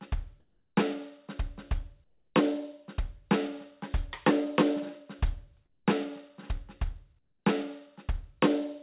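At 0.40 to 0.76 s, 2.04 to 2.34 s, 5.70 to 5.86 s and 7.19 to 7.45 s, the quiet background, already about 50 dB below the loudest passages, gives way to a flat, textureless hiss about 3 to 6 dB quieter. This is likely comfort noise in place of the background, inserted while transmission paused. Unlike a dropout or a gate, the gaps never go silent: steady synthetic noise fills them. Throughout, nothing is heard above 4 kHz, which fits a narrowband G.711 call path.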